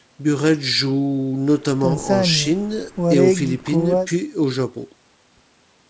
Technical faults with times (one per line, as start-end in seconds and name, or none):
none